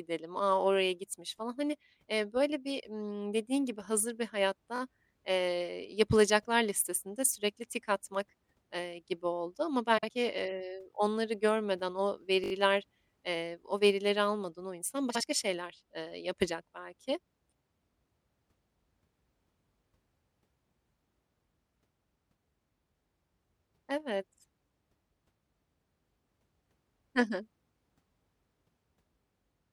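At 4.76 s there's a quick stutter, a repeated buffer: a 20 ms chunk plays two extra times with hard joins, which points to the device rerunning its last buffer. At 9.98 s, frames out of order: two roughly 52 ms blocks swap places, giving a garbled flutter. At 12.44 s the same stutter returns with four extra repeats, so it lasts a bit longer. At 15.09 s a second block swap lasts about 0.12 s.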